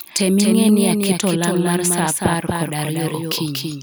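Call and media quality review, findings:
Doubled audio track, whole clip: speech has a second full-band copy trailing about 200 ms behind, roughly 5 dB down. It has no decay or room tail, just a clean slapback. Likely a second capture path running slower, or an edit stacking two out-of-step copies.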